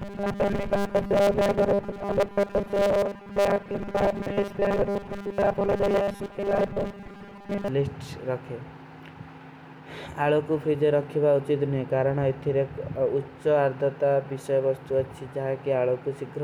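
Speech carries robotic sound from repeated short buffers from 0.01 s to 7.68 s: a rigid, metallic buzz pitched at 200 Hz that only loosely tracks the talking. That pitch fits a 5 ms block being looped, likely because fresh audio arrived too slowly and most of the span was filled with repeats. A spectrogram would show flat, evenly spaced harmonics at 200 Hz multiples, and the waveform a periodic, stamped-out pattern.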